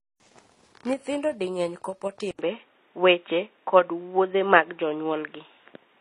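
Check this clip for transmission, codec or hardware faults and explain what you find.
Two faults are audible: a layered codec sound across the whole clip, and an abrupt drop in quality partway through the speech.

Transcoding between lossy codecs affects the entire clip. Nothing survives above 11.1 kHz, and smeared, swirly artefacts sit on top of one another. The mix likely comes from an MP3 stage re-encoded as HE-AAC at around 24 kbit/s, each pass adding damage. On a spectrogram, a flat ceiling at 11.1 kHz appears, with patchy, blotchy high bands.

The input switched to a poorer device at 2.31 s, just after "di mang’eny kopo", and stays that way to the end. An 80 ms gap is followed by duller, boxier sound that stops at 3.8 kHz. A new noise floor sits about 40 dB down, and the level shifts by about 5 dB. A second microphone or a headset call profile is the likely cause. The waveform shows a short flat gap, and the spectrogram's top band vanishes.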